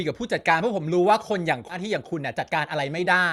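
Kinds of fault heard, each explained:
skip ahead: around 1.69 s the speech jumps forward with no gap, roughly 0.7 s of audio missing, unlike a dropout, which leaves silence or a fill.
jitter buffer speed-up: from 1.79 to 3.21 s the speech runs about 9% fast at unchanged pitch, as tiny pitch-period pieces are trimmed, unlike resampling, which raises pitch.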